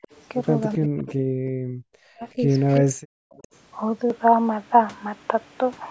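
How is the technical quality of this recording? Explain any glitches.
The recording has two recurring call faults in the first three and a half seconds. The audio tops out at 8 kHz, consistent with call microphone processing.

Speech suppressed in double talk occurs at 0.00 to 0.05 s, 0.76 to 1.33 s, 1.61 to 2.47 s and 2.81 to 3.01 s. The level falls sharply, by up to about 35 to 40 dB. The longest dip runs close to a second. The likely cause is the echo canceller. With both sides talking at once, it could not tell the talker from loudspeaker echo. So it turned everything down.

An echo leak is heard at 0.04 to 0.16 s, 1.09 to 1.13 s, 2.52 to 2.80 s and 3.30 to 3.56 s. A faint copy of the speech returns 381 ms late. It sits about 20 to 30 dB below the main voice and comes in short scraps. Likely, one side was on a loudspeaker. Its echo canceller did not remove everything the microphone picked up, so the remainder was sent back.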